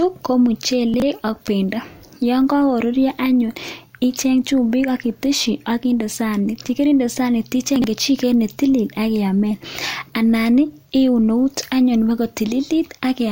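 A 20 ms chunk of speech arrives late and plays three chunks after its proper place, leaving chunks out of order at 0.94 to 1.02 s and 7.76 to 7.84 s. Nothing is missing, but each 80 ms stretch sounds jumbled, with three hard joins.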